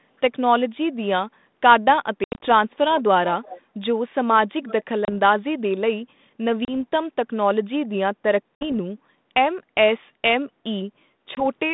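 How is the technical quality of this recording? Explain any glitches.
The recording is narrowband telephone speech, with the 150 Hz to 3.7 kHz line band and light coding noise consistent with G.726 ADPCM at 32 kbit/s. It has two recurring faults: packet loss on the ADPCM call and a short echo leak.

Packet loss on an ADPCM call occurs at 2.24–2.49 s, 5.05–5.10 s, 6.65–6.72 s, 8.55–8.74 s and 11.35–11.45 s. The first is the worst: about 140 ms is lost in gaps scattered over 180 ms, and the longest single gap is 80 ms. The others lose 20 to 60 ms. Each gap is a hard-edged silence. When the audio resumes, the decoder's adaptive predictor and step size no longer match the sender's, so the sound comes back slightly distorted, then settles within tens of milliseconds.

An echo leak appears at 3.43–3.61 s and 4.64–4.84 s. A faint copy of the speech, roughly 20 dB down, follows the original by 365 ms. 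This is likely a far-end loudspeaker whose echo canceller let some of the played-back sound through its microphone, which then sent it back.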